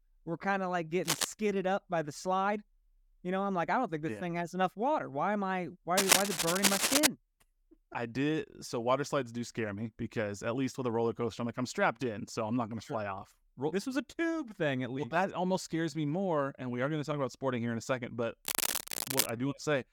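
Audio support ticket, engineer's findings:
Cable scratch noise, 1.03–1.25 s (after "were kind of like"), 5.97–7.07 s (after "am I", louder than speech), 18.45–19.32 s: ragged broadband bursts, smeared vertical hash on spectrogram, spiky waveform. Likely a worn cable or connector with rapidly varying contact resistance.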